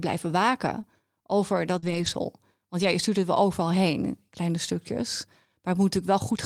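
A speech recording carrying two kinds of network damage. Short concealed packet loss appears at 0.81 to 0.85 s and again at 1.79 to 1.84 s. In each case about 20 ms and then 40 ms of audio failed to arrive in time, and the decoder bridged the hole by extending the preceding sound before crossfading back into the real signal. Each spot is heard as a brief smear or wobble rather than a dropout. A lost packet rebuilt from error correction follows at 1.82 to 2.08 s, overlapping the tail of the second concealment, and again at 2.82 to 2.84 s. There is no gap at either point because the decoder played the low-bitrate backup copies carried in the following packets. Across the longer stretch, about 140 ms of rebuilt audio, which points to seven separate 20 ms packets, the speech turns rougher and grainier. The single short rebuild near 2.8 s gives only a momentary coarse patch.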